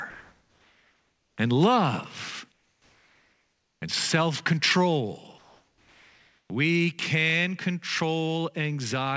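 From 0.10 to 1.38 s, just before "and love", the real background gives way to comfort noise in place of the background, most likely because the sender's voice detector halted transmission and the receiver synthesised a stand-in. The same happens from 2.52 to 3.82 s, right after "and love", and again from 5.38 to 6.50 s. Each gap is a smooth, featureless hiss, about 42, 44 and 36 dB below the loudest speech, shifting the floor by about +2, −3 and −2 dB. On a spectrogram these stretches show as flat, textureless bands with abrupt edges.

At 6.48 s the speech resuming after the third gap suffers an onset clipped by the voice detector. Roughly 20 ms of its soft start was likely never sent and was covered by comfort noise, so the sound begins with a hard, sudden attack. The waveform jumps straight up instead of ramping up. Throughout, nothing appears above 8 kHz, which fits a wideband call codec such as G.722.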